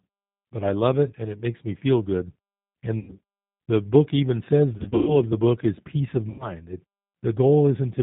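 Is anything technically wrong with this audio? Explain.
Yes. Throughout, the speech carries the sound of the G.729 codec at 8 kbit/s: nothing above 4 kHz, and a rough, slightly synthetic texture from the rebuilt vocal tract and pulses. This is buzzier than simple band-limiting.

There is VoIP packet loss concealed by the speech codec at 2.99–3.12 s before "the book even says", at 4.77–5.18 s between "the book even says" and "of the book is", and at 6.30–6.52 s after "book is peace of". The decoder stretches its last pitch into a fading buzzy tone or coloured noise, and the voice stays weak briefly afterwards. This is unlike a clean dropout or click. The first and last gaps each lose about 90 ms. The middle one loses 210 ms scattered over 300 ms, with the longest run 120 ms. The muted pauses between phrases fall silent as expected.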